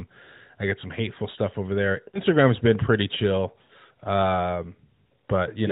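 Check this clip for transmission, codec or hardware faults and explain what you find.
Two short dropouts come from lost AMR speech frames, at 2.08 to 2.20 s and 3.62 to 3.72 s. The narrowband codec carrying the speech cuts everything above 4 kHz.

Lost AMR speech frames: Frames failing their checksum force the decoder to repeat its last pitch and vocal-tract settings at decaying gain. The gaps fit roughly three and four missing 20 ms frames. Each sounds like a smeared, fading warble. A spectrogram shows frozen harmonics dimming, and the waveform shows a shrinking envelope.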